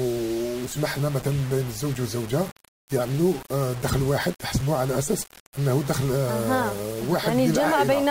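From start to finish the sound carries a coarse, grainy distortion that rises and falls with the signal itself, the classic mark of low bit depth without dither. The likely cause is amplitude values rounded to very few levels, which fits a 5-bit resolution, with no noise added to decorrelate the error. The resulting error sits only about 20 dB below the signal, so quiet passages turn gritty and the faintest parts sputter or drop out.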